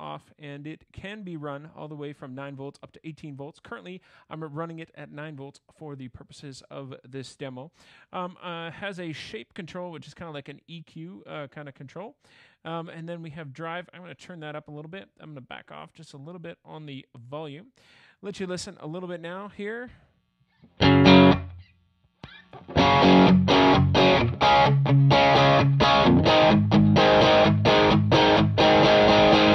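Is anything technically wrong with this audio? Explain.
No, nothing technically wrong turns up anywhere in the audio.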